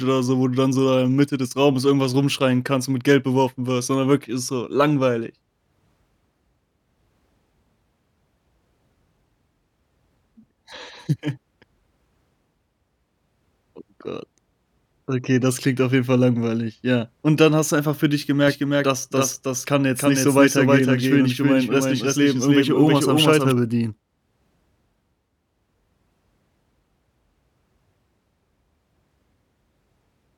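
Speech, with a doubled audio track from 18.48 s to 23.52 s, right after "du einfach für dich": a dry, full-band copy about 5 dB quieter trails roughly 300 ms behind, cutting in and out abruptly, likely from a second, slower capture path mixed in.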